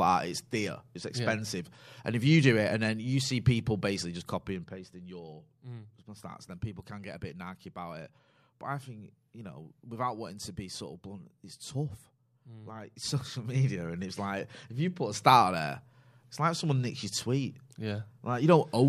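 A speech clip with zipper noise in two places: from 4.01 to 5.18 s the level drops about 10 dB, and from 12.97 to 14.06 s it rises by about the same amount. Each change moves in steps of about 1 dB, around ten a second, with no smoothing, so every jump leaves a small click and a ticking rides on the voice. A smooth fader move glides through the same range with no ticks.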